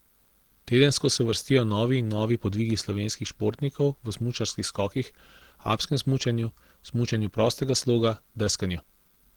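Throughout the speech, hoarse, grainy texture without MP3-style swirl suggests likely Opus compression, fitting hybrid mode near 16 kbps; bandwidth still reaches about 20.3 kHz.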